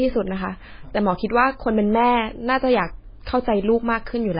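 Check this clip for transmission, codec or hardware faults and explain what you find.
One fault runs through the whole speech clip. From start to finish the sound is watery and swirly, sibilants chirp metallically, consonant onsets smear, and nothing is present above 5 kHz. This is heavy damage from MP3 compression, likely at a very low bitrate, which fits about 16 kbps. Starved of bits, the encoder cuts the treble at a fixed 5 kHz and discards weak frequency lines, which flicker on and off between frames and cause the swirl.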